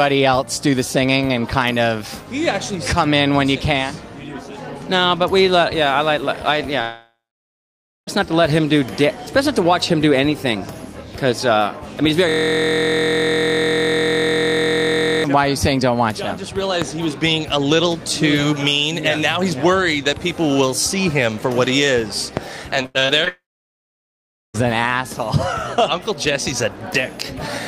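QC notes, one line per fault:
6.81–8.09 s: long network dropout, likely. About 1.25 s of audio lost; the last sound trails off briefly, then near-silence for roughly 0.93 s before resuming past the gap.
12.29–15.24 s: system hang loop. A 23.22 ms piece repeats exactly, giving a steady 43.1 Hz buzz, which fits a 1024-sample buffer cycling while the system froze.
16.82 s and 22.37 s: loud pop, likely. A single sharp pop each time, roughly 15 dB above the sound, which continues underneath unbroken, unlike a dropout or loop.
22.83–23.28 s: repeated packet loss (robotic sound). Five short holes, the longest 85 ms, patched by extending the previous sound; 38% of the span is filled, making it choppy.
23.28–24.56 s: long network dropout, likely. Another 1.26 s lost straight after the choppy stretch; a brief fading tail, then about 1.14 s of near-silence before the audio returns.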